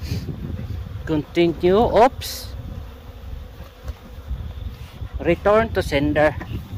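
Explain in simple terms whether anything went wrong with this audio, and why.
Hard clipping: the signal got louder than the system could handle, so its peaks were sliced flat. This adds harsh crackle at 1.40–2.07 s (the worst), 5.30–5.59 s and 6.18–6.28 s.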